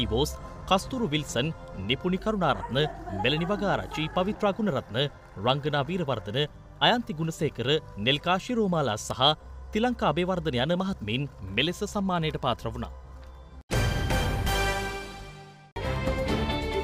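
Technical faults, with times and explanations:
Nothing here calls for a time or an explanation, since no technical faults turn up anywhere in the audio.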